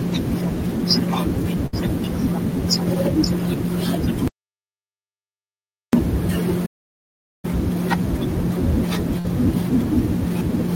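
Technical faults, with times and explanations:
1.66 to 1.74 s and 9.19 to 9.25 s, burst of packet loss: Two short holes in the speech. Each time a run of data failed to arrive, and the receiver patched over it by stretching out the last bit of sound and letting it fade. The first patch lasts about 64 ms and the second about 51 ms, so you hear a brief smeared buzz or hiss. The speech then jumps ahead with roughly 50 ms gone each time.
4.28 to 5.93 s, audio dropout to silence: The speech cuts out abruptly and stays in dead silence for about 1.66 s, with no room tone at all. That silence says the input itself vanished while recording carried on. The likely cause is a dropped connection, a device glitch or an accidental mute. When the sound returns it comes straight back in mid-flow, and whatever was said in between is simply gone.
6.66 to 7.45 s, playback stall: The sound halts mid-flow for about 0.78 s of silence and then picks up again. 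Here the gap most likely comes from the player running dry or its audio thread getting blocked, so output stopped until data was flowing again. It sounds like a stutter-pause rather than a smeared patch, with a clean stop and restart and no fading tail across the gap.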